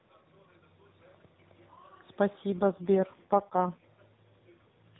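A speech clip that turns rougher, buzzier and more synthetic from 2.50 s to 3.86 s, with no gap and no change in bandwidth, then returns to its earlier quality. This is an AMR rate drop. The network has pushed the narrowband mobile codec down to a lower rate, spending bits on error protection instead of the voice. The coarser sound fits a fall from 12.2 kbps to 4.75 kbps, from a light AMR-NB coding that keeps everything below 4 kHz.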